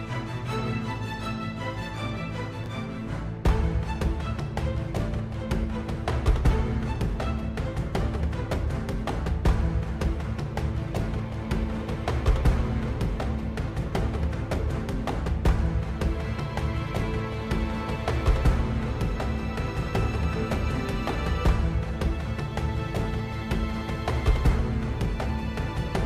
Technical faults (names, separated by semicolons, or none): chunks out of order